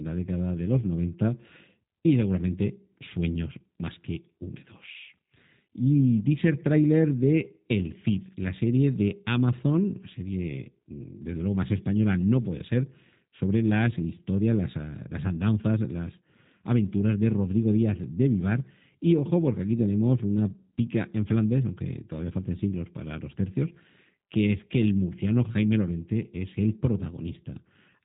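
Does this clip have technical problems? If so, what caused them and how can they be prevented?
Yes. Throughout the speech there's G.729 codec damage: nothing above about 3.8 kHz, plus a rough, slightly synthetic edge from rebuilding the voice out of a vocal tract filter and a few pulses per frame, which fits G.729A at 8 kbit/s. Use a wideband codec like Opus if the link allows.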